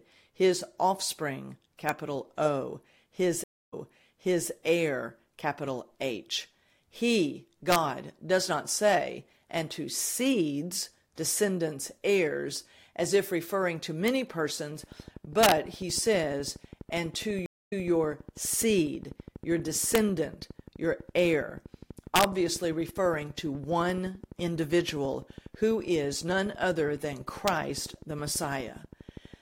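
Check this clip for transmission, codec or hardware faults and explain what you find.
Three faults turn up in this speech: integer overflow cracks, two stream reconnects, and a train of clicks covering the back half.

Integer overflow hits at 1.89, 7.72–7.76, 14.08, 15.43–15.52, 19.95–19.98, 22.16–22.24 and 27.48 s. Peaks only about 0 to 2 dB past full scale wrap around to the opposite sign instead of being limited, so each one lands as a harsh, sudden crack, far nastier than ordinary clipping.

There are two stream reconnects. Around 3.44–4.50 s the link drops, leaving about 257 ms of silence, and a fresh decoder picks up 810 ms earlier, so you hear a chunk repeated. At 17.46–17.87 s the same thing happens, with 227 ms of silence and a jump back of 183 ms.

A train of clicks runs from 14.84 s to 29.35 s. It's a steady tick at about 12.1 per second, roughly 150 in all, at about the same level as the speech, and heard in the pauses too. 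It's likely interference from nearby gear or a faulty connection or power supply.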